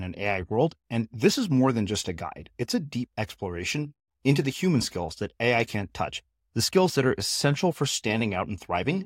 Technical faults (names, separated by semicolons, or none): none